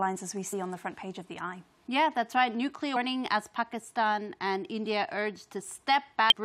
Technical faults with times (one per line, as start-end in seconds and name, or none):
0.52 damaged data in a compressed stream
2.95 damaged data in a compressed stream
6.30-6.32 damaged data in a compressed stream